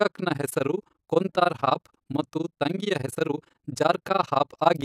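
From start to finish the speech carries overlap-add ripple. The frames were recombined with overlapping windows whose gains fail to sum to a constant, so the level swings by about 60 dB once per frame, at around 20 Hz, heard as a harsh, fast flutter.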